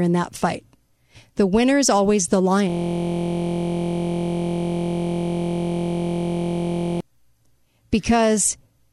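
From 2.70 s to 7.0 s the speech gives way to a steady buzz at about 43 Hz. This is a system hang loop: the system froze while the sound hardware kept replaying one 23-ms slice, which fits a 1024-sample ring buffer.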